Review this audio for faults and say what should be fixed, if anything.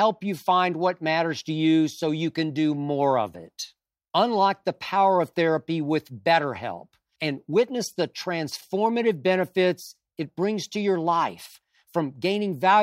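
Nothing should be fixed, since no faults can be heard in the audio.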